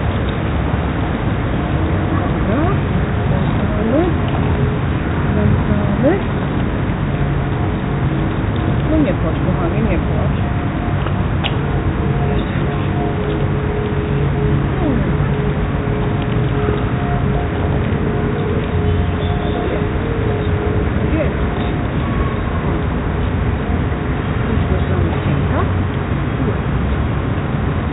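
No technical faults can be heard in this audio, which has passed through a call path whose band stops at 4 kHz, consistent with a narrowband telephone codec such as 64 kbps G.711 A-law.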